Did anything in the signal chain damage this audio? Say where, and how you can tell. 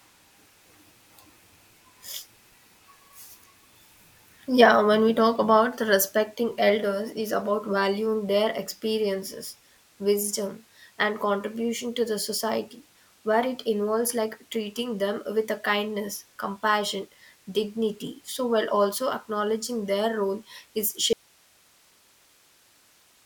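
Yes: an audio dropout to a faint residue from 21.13 s to the end. The speech cuts off abruptly, leaving only hiss about 35 dB down, so the downstream path stayed live. The break is likely in the analogue wiring ahead of the preamp.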